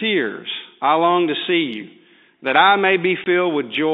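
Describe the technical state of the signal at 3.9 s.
At 3.9 s the speech is intact, carried cleanly through G.711 telephone coding with its narrow line band and no audible fault.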